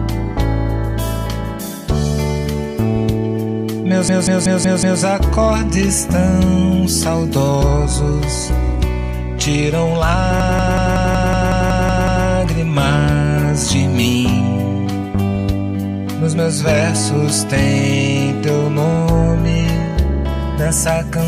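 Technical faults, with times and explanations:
4.09–5.02 s and 10.40–12.26 s, system hang loop: the system stalled while the audio hardware kept replaying one 186 ms slice of its ring buffer, which fits an 8192-sample buffer. The slice repeats exactly, 5 and then 10 times, at about 5.4 repeats per second. Because the slice is this long, it sounds like a machine-gun stutter rather than a steady buzz. The repeats are identical, which sets it apart from a skipping or glitching stream.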